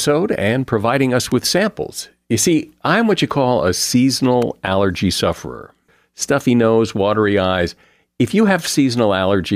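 At 1.32 s, between "and providing us" and "with samples", and again at 4.42 s just before "allergy sufferer stuffy nose", there's a sharp electrical switching spike, a snap that's likely a nearby switch arcing.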